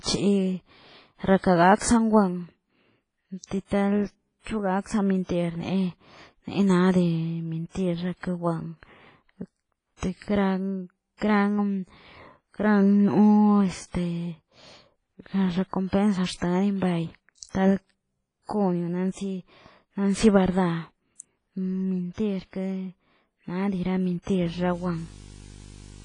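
Speech with heavy, washy, ringing coding damage throughout and nothing above 10.3 kHz, a hard ceiling on a spectrogram; this is likely WMA compression at a low bitrate around 24 kbps. Pre-echo, a short hiss smeared ahead of sharp attacks, appears at 1.38, 1.79, 7.69, 15.89, 17.43 and 17.49 s, spreading 30 to 59 ms before each onset. From 24.41 s to the end a video or display buzz sits about 20 dB below the signal: a 50 Hz field-rate buzz with hash, plus a 15.6 kHz line tone, showing as steady horizontal lines.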